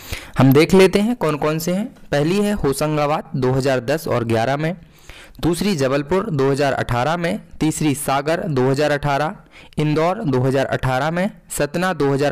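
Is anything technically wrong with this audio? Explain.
Yes. From 0.96 s to the end, one channel drops out. One side of the stereo feed was likely lost, so after the mono sum everything common to both channels falls abruptly by about 6 dB, and anything carried only on that side disappears entirely.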